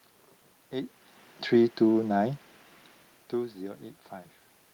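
Speech recording with no technical faults to report.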